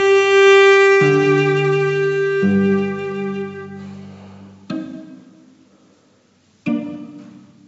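No technical faults can be heard at any point; the sound carries nothing above 8 kHz, which fits a wideband call codec such as G.722.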